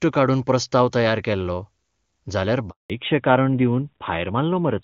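At 2.70 s the sound cuts out for 200 ms, until 2.90 s. This is a handover gap. The call switched networks, and no frames arrived during the move. The audio fades within a few tens of milliseconds, then goes silent.

From 2.90 s to the end, a fallback to narrowband follows. Before it, the HD Voice path sounds clear, which fits AMR-WB at a high rate. After the switch, everything above 4 kHz is gone. The sound turns dull and rougher, which points to narrowband AMR at about 12 kbit/s.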